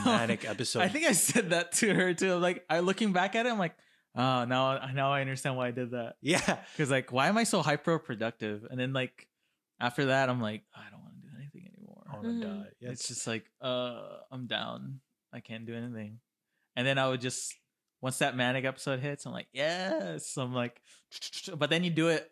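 No technical faults occur anywhere in this speech, so there is nothing to set out in time order.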